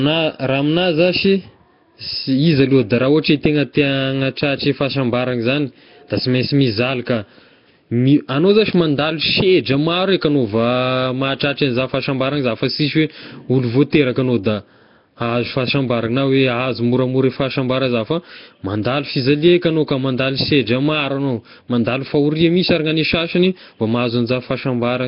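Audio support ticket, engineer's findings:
Speech path likely encoded with Nellymoser Asao (Nellymoser compression), entire clip. Coarse fixed-rate block coding, starved weak bands noise-filled. Symptom: rough hissy halo, smeared underwater tone, heavy damage, nothing above 5.3 kHz. Consistent with roughly 22 kbps Flash microphone stream.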